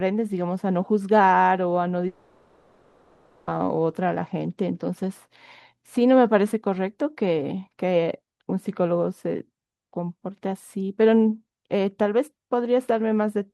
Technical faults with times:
2.07-3.49 long network dropout

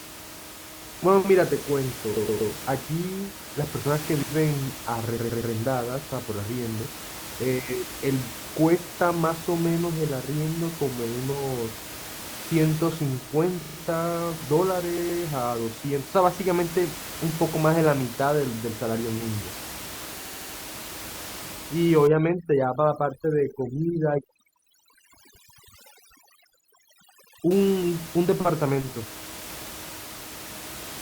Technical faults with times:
2.15-2.51 repeated frames
4.20-4.32 intermittent contact
5.17-5.53 repeated frames
13.61-13.77 repeated frames
14.97-15.21 repeated frames
20.21-20.53 repeated frames
22.07-27.51 overdone noise removal

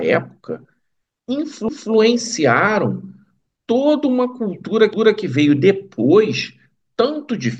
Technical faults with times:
1.68-1.93 overlapping chunks
4.93-5.18 overlapping chunks

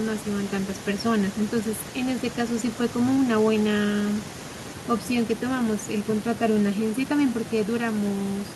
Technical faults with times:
none

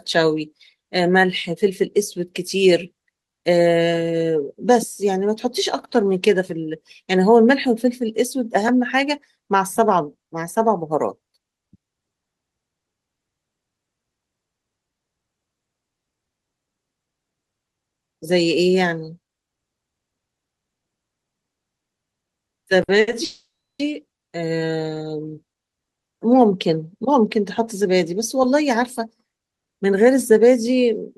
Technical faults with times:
22.83-23.09 short stall from a late packet
23.24-23.81 call audio freeze
27.81-30.38 jitter buffer speed-up

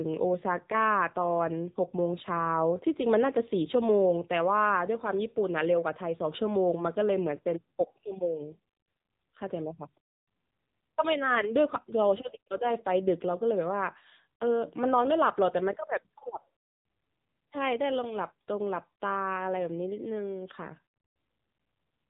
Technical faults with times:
0.00-22.10 AMR narrowband mobile codec

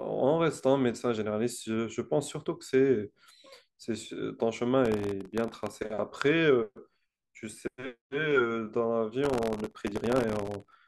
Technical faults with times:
4.85-5.75 processor overload crackle
9.24-10.76 processor overload crackle

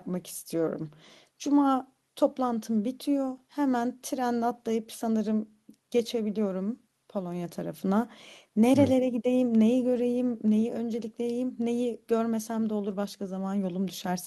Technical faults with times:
none

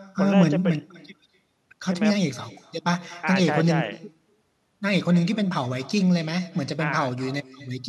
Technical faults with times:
0.00-7.88 echo with no canceller

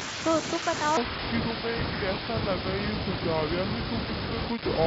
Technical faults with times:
0.97-4.86 section at the wrong speed

